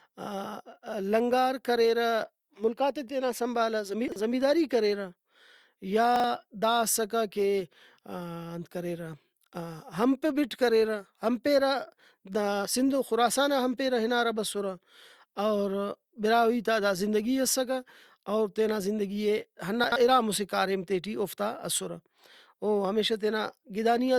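Chunks out of order at 4.08–4.16 s, 6.16–6.24 s and 19.84–19.96 s: a 40 ms block plays one or two blocks late, giving a brief jumbled stutter with three hard joins. Unlike a dropout, nothing goes missing and no silence appears, only the sequence is scrambled.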